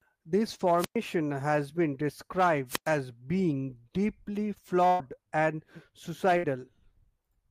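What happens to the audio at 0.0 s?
Nothing goes wrong at 0.0 s: the audio is intact, with no dropout, click or distortion at that point.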